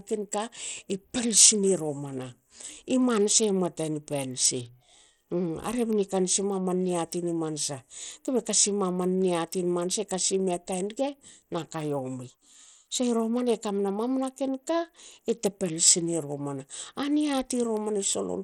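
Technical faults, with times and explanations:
Throughout, Bluetooth SBC compression: the speech sounds gritty and the treble flickers in and out, likely from a low SBC bit pool, consistent with roughly 80 kbps, starving the top sub-bands. A spectrogram shows a ragged, blinking upper band edge over granular noise.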